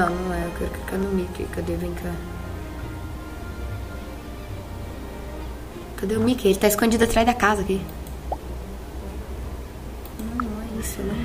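A short click recurs at a strikingly even 0.6 s spacing from 0.43 s to 11.23 s, about twenty in all, heard as clock drift buffer slips. The likely cause is two devices running on separate clocks, mismatched by roughly 500 ppm, so the buffer between them drifts until a small block of around 15 samples is dropped or repeated. The metronomic regularity and the absence of any audible gap distinguish this from random clicks or network dropouts.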